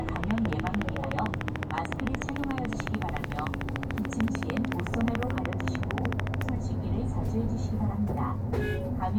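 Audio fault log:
0.09–6.50 s, train of clicks: Something in the chain is likely injecting a brief pulse over and over, as interference from nearby equipment or a faulty connection or power supply would. The pulses arrive at a steady 13.6 per second, around a hundred in all, each with much the same shape and rising roughly 20 dB above the sound itself. They come through as an even, rapid ticking laid over the audio, audible in the quieter gaps too, then stop.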